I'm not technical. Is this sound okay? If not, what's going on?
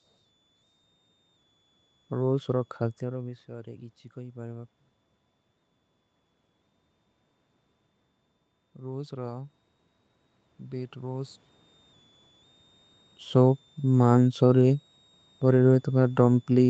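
No. A faint, high whistle sits under the speech for the whole clip, around 3.4 to 3.8 kHz. This is a switching supply whistle. A power supply in the equipment is buzzing at a pitch you can hear. Its pitch wanders a little within that range.

From 2.45 to 4.75 s there is automatic gain rising. Around 3 s the speaker seems to move away, and the voice drops. The system then turns its volume up slowly. Voice and background grow louder together over about two seconds.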